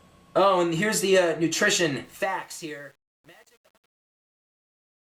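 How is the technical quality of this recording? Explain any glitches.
Truncation distortion on a fade spoils the back half of the recording. From 2.05 s to the end, a fade or gain stage keeps too few bits, which fits an 8-bit stage, and adds no dither. As the level drops toward the smallest step, the waveform collapses into coarse square steps, so the tail turns gritty from about 2.5 s onward.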